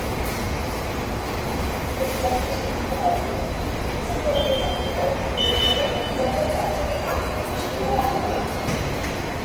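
Throughout the clip, Opus compression at a low rate is the likely cause: the graininess points to roughly 16 kbps in the music (CELT) mode, where band energies survive but their detail is filled in. Tones come out noisy, rough and grainy, while the bandwidth stays full up to about 20.2 kHz.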